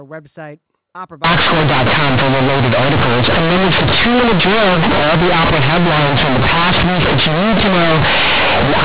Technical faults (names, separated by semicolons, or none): companded audio read as linear